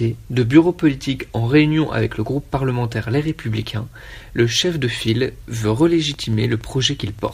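From 6.14 to 7.30 s, a train of clicks ticks steadily at 10.5 per second, about fifteen in all, roughly as loud as the sound. Likely outside interference.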